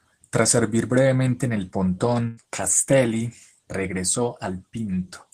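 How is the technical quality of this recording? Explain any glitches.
The recording has one glitch, a burst of packet loss at 2.27 to 2.39 s, just after "servir brevemente en el". There, the last bit of speech is stretched into a held, steadily fading sound for about 97 ms, and then the talker jumps ahead, with roughly 100 ms of the sentence gone. Several consecutive packets went missing or arrived too late, so the receiver extended and faded the last good audio to cover the hole before resuming.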